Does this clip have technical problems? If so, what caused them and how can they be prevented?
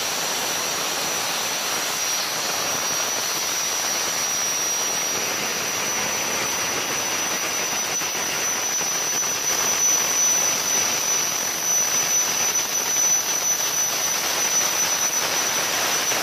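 Yes. From 9.43 s to the end, there is a doubled audio track, likely caused by a second, slower capture path or an edit that left two copies of the audio out of step. A full-band copy, about as loud as the original, follows roughly 0.4 s behind. It arrives abruptly, with no decay or room colour, so every sound is heard twice. To prevent it, route each source through only one path and check edits for stacked copies.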